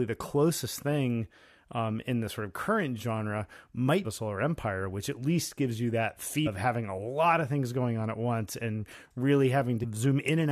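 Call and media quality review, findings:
Damaged data in a compressed stream: three brief blips in the speech at 4.04 s after "sort of current genre", at 6.46–6.48 s between "least gives you that" and "having a lot of", and at 9.82–9.85 s. Probable component is the decoder input. Corrupt bytes cause misread frames and a lost sync, and the decoder resyncs at the next header.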